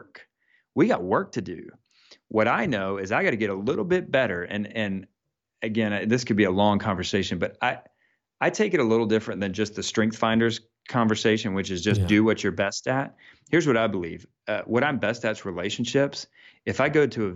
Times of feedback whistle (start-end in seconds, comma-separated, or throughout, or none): none